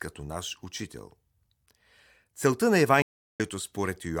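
At 3.02 s the connection drops, and the player reconnects and starts a fresh decoder mid-stream. This stream reconnect leaves 0.37 s of silence until 3.40 s, after which the speech picks up roughly 150 ms further on, skipping a brief stretch.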